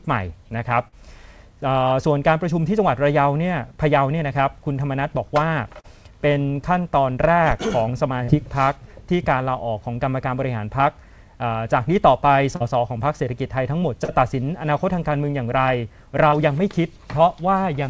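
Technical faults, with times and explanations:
0.88, 5.80, 8.24, 12.56 and 14.04 s: short concealed packet loss. Each time about 40 ms never arrived. The decoder extended the preceding sound, heard as a brief smear or wobble.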